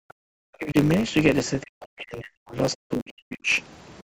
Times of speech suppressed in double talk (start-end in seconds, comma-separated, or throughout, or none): 0.57-0.78, 1.63-3.51